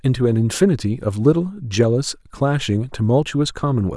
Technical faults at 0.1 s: none

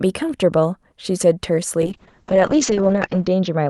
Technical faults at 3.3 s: call bitrate drop

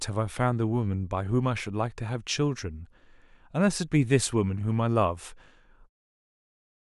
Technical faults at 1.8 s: none

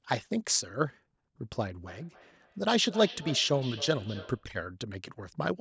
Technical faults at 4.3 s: feedback echo between two devices

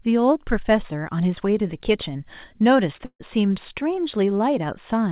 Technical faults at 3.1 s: burst of packet loss

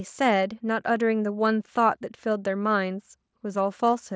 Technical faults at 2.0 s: none

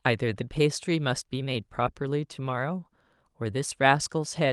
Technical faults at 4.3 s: none

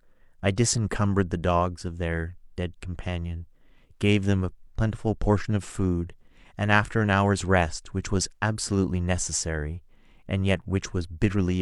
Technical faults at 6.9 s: none

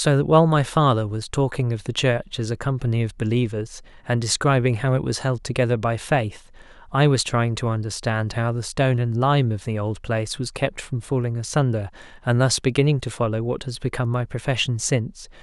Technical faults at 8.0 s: none

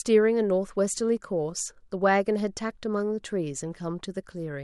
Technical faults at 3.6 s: none

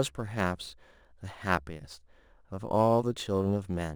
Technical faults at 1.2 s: crude rate conversion

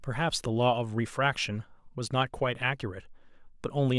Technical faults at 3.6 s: none

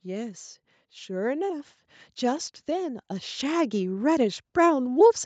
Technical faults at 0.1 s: none

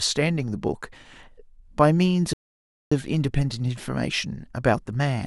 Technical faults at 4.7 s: none

